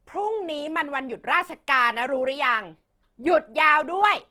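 From start to finish, the speech carries plainly audible Opus compression damage. The bandwidth stays full, but the texture does not. Consonants and vowels sound rough and grainy, with a hissy fizz where fine detail should be. The cause is likely the codec's music mode running short of bits. It keeps each band's energy, then fills bands with noise or folded copies of lower ones. The grain fits a rate around 16 kbps.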